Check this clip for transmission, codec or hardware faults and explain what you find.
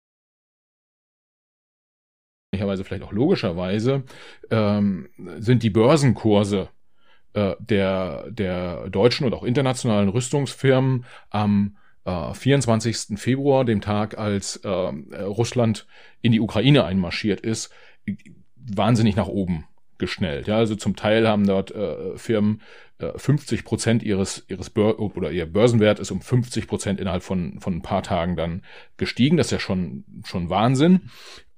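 One fault: an audio dropout to silence from the very start to 2.53 s. The input was likely lost, through a disconnected device, failed link or mute, while recording carried on writing silence, so the clip opens in silence with no room tone before the speech abruptly cuts in.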